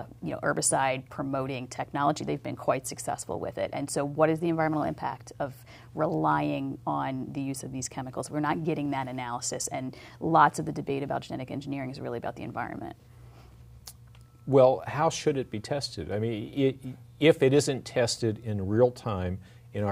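Nothing goes wrong anywhere in this one, so there's no technical fault to point out at any moment.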